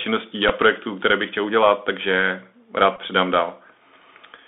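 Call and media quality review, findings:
Bluetooth CVSD headset codec, whole clip: band squeezed to roughly 250 Hz to 3.6 kHz, scratchy s sounds and a grainy hiss under the speech. Fits a 64 kbps CVSD link: one-bit up/down steps can't keep up with loud highs, so they smear.

Bluetooth headset packet repeated, at 0.49 s and 2.96–3.00 s: a short buzzy stutter at each. The headset chip replayed the last packet to cover about 7.5 ms and 15 ms of loss, consistent with two and four 3.75 ms packets. The repeats pulse near 267 Hz.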